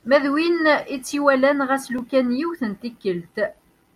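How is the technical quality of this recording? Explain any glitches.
The recording has one recurring glitch: clock drift buffer slips in the speech. From about 0.99 s to the end, a click or pop lands once every second, around four times in all. The likely cause is two devices running on separate clocks that disagree by roughly 700 ppm. The buffer between them gradually overfills or runs dry until a short block of samples, a few dozen each time, is dropped or repeated to catch up. What separates this from network dropouts or random digital clicks is the strict one-second spacing, which keeps its rhythm regardless of what is being said.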